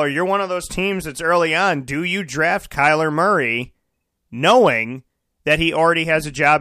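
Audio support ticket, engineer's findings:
No audible faults found.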